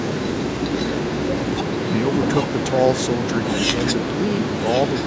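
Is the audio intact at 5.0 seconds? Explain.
No. From 4.55 s to the end, an echo leak adds a delayed copy of the speech about 1.07 s late, roughly 10 dB down, likely from incomplete echo cancellation.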